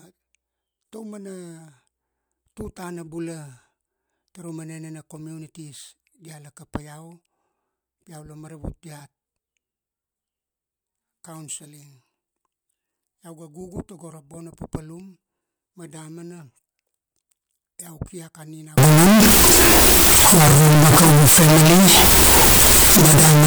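A speech recording that turns into a float read as integer fault from 18.78 s to the end at 23.47 s, likely 32-bit float samples read as 32-bit integers. The waveform jumps to a near-square block at an almost fixed, high level, the spectrogram fills with broadband energy, and background noise becomes as loud as the speech.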